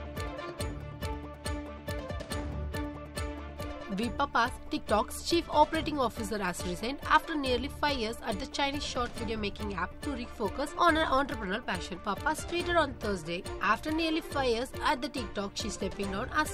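No technical fault can be heard anywhere in this audio. There is nothing in it that calls for correction or closer inspection.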